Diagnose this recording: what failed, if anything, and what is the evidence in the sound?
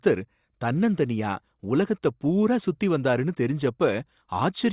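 Nothing failed; no faults heard.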